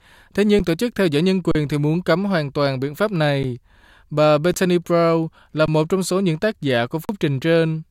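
The speech drops out in brief underruns with a held sample at 0.59, 1.51–1.55, 3.43, 4.53, 5.66–5.68 and 7.05–7.09 s. Each time the buffer empties, the output freezes flat on its last value for 10 to 40 ms, and live audio went missing meanwhile.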